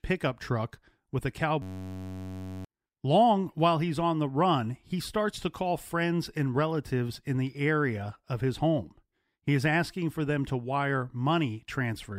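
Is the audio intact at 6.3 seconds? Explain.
Yes, at 6.3 seconds the speech is intact, with no audible fault at that moment.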